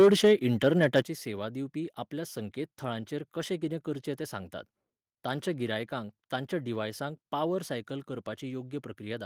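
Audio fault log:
0.00–0.33 s and 0.96–1.00 s, microphone overload: the peaks are flattened into a harsh crackle, with about 5 dB and then about 4 dB of overshoot. The cause is likely input volume set too high. The grit rides only the loudest moments, heavily in the opening third of a second and briefly before "सेवा दिवपी आपल्या संकेतथळांचेर", unlike steady distortion.
1.02 s, microphone volume stepped down: speech and background drop together by about 8 dB in one abrupt step, right after the second distorted peak and just before "सेवा दिवपी आपल्या संकेतथळांचेर". The drop comes in one instant rather than as a gradual fade, which likely means call software cut the device's input volume in response to clipping.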